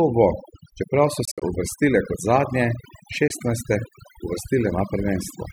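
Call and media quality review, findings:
Overdone noise removal, throughout: background pulled down and broken into twinkling specks. Suppressor set too aggressive, gating individual frequency bands near its noise estimate and taking low-level speech detail with them.

Bluetooth dropout, 1.25–1.42 s and 3.28–3.31 s: silent holes, resuming further along. First event about 100 ms lost across 160 ms, longest gap 61 ms; second 20 ms. Likely late packets to headphones discarded, several then one.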